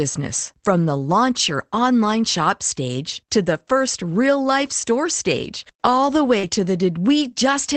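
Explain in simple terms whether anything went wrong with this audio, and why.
Yes, two closely linked problems occur right before "to the", at about 6.4 s.

Short concealed packet loss: From 6.39 to 6.45 s, about 40 ms of the call arrived too late to be played. The receiver covered the hole by stretching out the last sound and then blending back, so this moment sounds briefly smeared or wobbly, and a quick consonant may disappear.

Lost packet rebuilt from error correction: From 6.43 to 6.49 s, more audio went missing, but the following data carried a rough backup copy of it, which the receiver played instead. There is no gap, but these 40 ms sound grainier and noisier than the surrounding speech.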